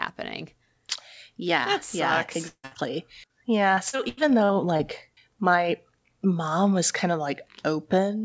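From 2.48 to 2.65 s the speech stops arriving and the last sound is stretched into a fading buzz or hiss for roughly 150 ms, followed by about 50 ms of near silence. The cause is likely a long network dropout, with about 160 ms of speech lost outright.

Directly after, from 2.65 to 2.73 s, a burst of packet loss removes another 60 ms. The receiver keeps extending the previous sound at falling level, so the filled sound continues before real audio resumes further along.

Short concealed packet loss follows at 2.73 to 2.77 s and again at 3.27 to 3.31 s, each dropping about 20 ms. The decoder bridges each hole by extrapolating the preceding waveform, heard as a brief smear or wobble as it blends back.

From 3.75 to 4.81 s, ending just before "my mom was kind", repeated packet loss produces robotic sound. Six separate gaps, the longest 85 ms, total about 220 ms, so roughly a fifth of that stretch is patched. 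Each patch sits close to the next, giving a choppy texture with fragments missing. Throughout, the G.722 call path leaves nothing above 8 kHz.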